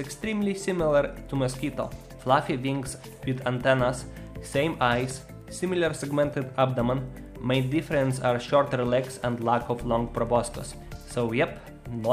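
Nothing stood out as a technical problem on listening to the clip.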